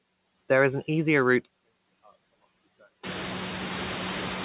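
A speech recording with two faults. Noise suppressor artifacts run throughout: the suppressor pulls the bands it reads as steady noise down by about 14 dB frame by frame, so the background dips between phrases and swells back under them. On a spectrogram the gaps look patchy and mottled, not a smooth noise floor, and this becomes plainer once the room noise rises by about 19 dB around 3 s. From 1.45 s to the end the level suddenly falls by about 28 dB, and what remains is a faint copy. The likely cause is one channel inverted: with one side's polarity flipped, the centred speech common to both channels cancels when they are summed to mono, leaving only their small difference. On a waveform the envelope collapses abruptly at 1.45 s to a narrow trace, and a spectrogram shows the speech bands fading to a weak outline, all still within the 4 kHz band limit of the G.711 call path.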